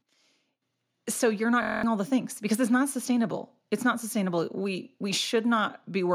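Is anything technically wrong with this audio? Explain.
Yes, there's a system hang loop from 1.63 to 1.83 s: the system stalled and a 23 ms chunk, which fits a 1024-sample buffer, replayed nine times, buzzing at 43 Hz and dropping about a fifth of a second of speech.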